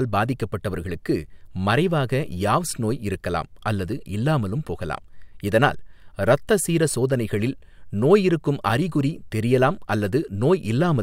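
No technical faults are audible.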